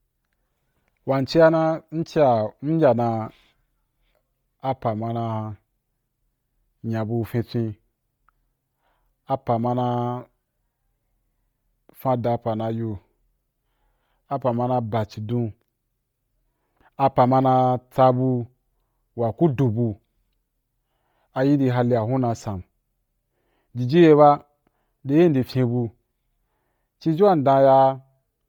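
Throughout this speech clip the voice carries a breathy, grainy edge, with the top of the spectrum sounding hissy and smeared rather than clean, though content still reaches about 20.2 kHz. This is likely Bluetooth LC3 compression, its upper bands refilled with noise at a heavily damaging low bitrate, consistent with roughly 32 kbps and 10 ms frames.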